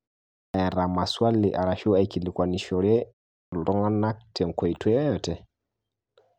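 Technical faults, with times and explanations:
0.49–0.54 s and 3.48–3.52 s, clipped start after a pause: after silences of 0.49 s and 0.43 s, the output path is still waking when sound resumes, so about 52 ms and 44 ms of onset are lost and the sound begins abruptly, without its first sounds.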